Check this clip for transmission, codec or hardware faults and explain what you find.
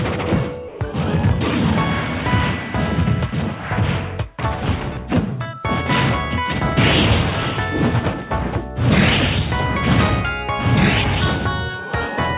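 One fault stands out, near the start of the clip, heard against a call path whose audio stops at 4 kHz, consistent with G.711 A-law telephony.

Sound dropped by the voice detector, from 0.68 to 0.80 s: for 120 ms the sound vanishes and a flat, steady hiss takes its place before the signal returns. This is likely the sender's voice detector misjudging that stretch as background and halting transmission, so the receiver filled the gap with synthetic comfort noise until detection resumed.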